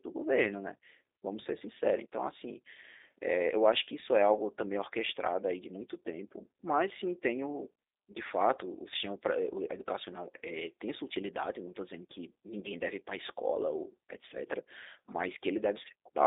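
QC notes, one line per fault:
Throughout, G.729 codec: the speech has been squeezed through a narrowband VoIP codec that rebuilds each short frame from a vocal tract filter, a pitch predictor and a few pulses, which fits the G.729A variant at 8 kbit/s. Its telephone line band of 300 Hz to 3.7 kHz leaves nothing above 3.8 kHz, so sibilants lose their bite and lows thin out. The pulse-based rebuilding gives plainly audible roughness and a synthetic, buzzy edge.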